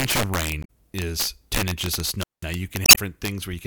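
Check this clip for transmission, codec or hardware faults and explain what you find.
Yes, there's a fair bit going on: three separate kinds of fault, one running through the whole speech clip and two that hit at specific moments.

Integer overflow is present throughout. The signal is being pushed roughly 10 dB past full scale, and instead of being limited, the loudest peaks wrap around to the opposite sign. Around one percent of samples end up over the limit. Each of those peaks flips across the entire range, so you get harsh, violent cracks on the louder syllables, noticeably sharper and nastier than ordinary clipping would sound.

Damaged data in the compressed stream shows up twice, from 0.61 to 0.70 s and again from 2.82 to 2.98 s. In both spots, part of the encoded data is wrong, so the decoder misreads those frames, loses sync and hunts for the next valid frame header. What you hear is a short glitch as playback resumes.

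There's also a wireless microphone squelch dropout from 2.18 to 2.46 s, right after "inches of". The FM radio link from the mic fades, hiss rises briefly, and then the receiver's squelch kicks in and mutes the output for about 190 ms. You get a near-silent hole, and when the signal comes back above the squelch threshold, the speech returns.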